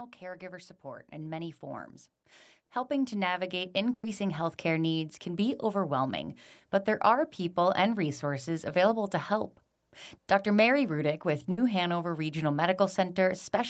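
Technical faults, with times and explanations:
0.19 to 5.89 s, automatic gain rising: the level climbs steadily over almost six seconds, about 14 dB in all, with the sound and the background noise swelling together. The gain control decided the input was too quiet and kept nudging the gain up.
3.93 s and 11.51 s, burst of packet loss: two short dropouts. At 3.93 s about 100 ms goes missing; the receiver stretches the last bit of sound, fades it, and you get about 70 ms of actual silence before it picks up further along. At 11.51 s it's a shorter 60 ms gap, patched the same way, with the audio jumping ahead when it resumes.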